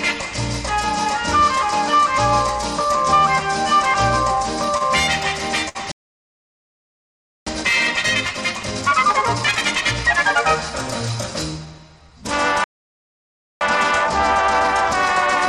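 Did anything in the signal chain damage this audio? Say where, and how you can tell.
Yes. The damage sits at the network stage, where three short stalls from late packets occur. At 4.35 s a sound is held for about 15 ms, at 4.77 to 4.83 s for 34 ms, and at 5.69 to 5.77 s for 62 ms. Each time, the jitter buffer ran dry because a packet missed its deadline, so the receiver extended the last sound until the packet turned up and then resumed from the same point. Nothing is skipped, but each hold adds a faint buzz or dip and pushes playback later.

Two playback stalls follow in the player stage. The output drops to silence mid-flow from 5.91 to 7.47 s, about 1.5 s, and again from 12.64 to 13.61 s, just under 1 s. Both gaps are abrupt, with the sound cutting out and then resuming. The likely cause is the player starving for data or its output thread being blocked, leaving nothing to render until it recovered.

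Each stall is followed by a time-compressed catch-up as the player drains its accumulated backlog. From 7.47 to 10.47 s the audio runs at 1.5 times normal speed, and from 13.61 s to the end at 1.15 times. Pitch stays put, which shows that small segments are being cut out and cross-faded rather than the audio being resampled.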